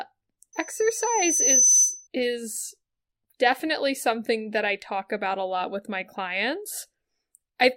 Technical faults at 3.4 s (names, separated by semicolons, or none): none